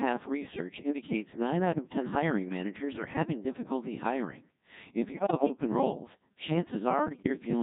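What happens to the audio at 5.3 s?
Bit errors on digital voice radio hit from 5.12 to 5.52 s, around the 5.3 s mark. Flipped bits, at a rate of around 7 percent, corrupted the compressed frames over that span, roughly nine of them. In a vocoder this lean, each bit sets the pitch, loudness, voicing or spectral shape of a whole frame, so the damage is structural rather than a simple click. The synthetic speech lurches in pitch and level and changes tone colour from frame to frame, breaking into bleeps, warbles and robotic gibberish for about 0.4 s.

Underneath this, the whole clip runs through the Codec 2 vocoder, and its sound points to the 1.6 kbit/s mode. Codec 2 transmits only pitch, voicing, energy and a spectral envelope, and the decoder rebuilds the speech from sine waves instead of preserving the original waveform. That is why the speech at 5.3 s, and everywhere else, sounds buzzy and robotic, with heavy codec damage.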